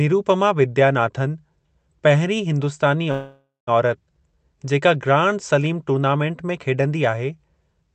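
At 3.11 s, right after "पहिरीं हिंदुस्तानी", the speech stalls in a call audio freeze lasting until 3.69 s. The last sound is stretched into a fading buzz or hiss, then drops to near silence for about 190 ms. The likely cause is packets held up in transit, leaving the jitter buffer empty. When audio resumes, it carries on where it stopped. Nothing is lost, but everything after runs about 0.56 s late.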